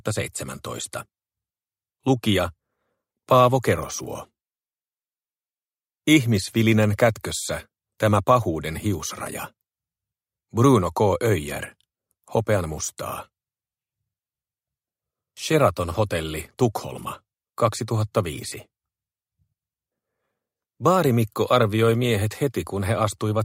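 Nothing stood out as a technical problem on listening.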